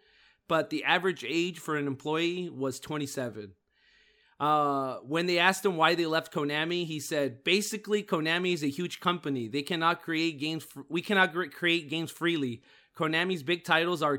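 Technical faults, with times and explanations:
No technical fault can be heard anywhere in the recording.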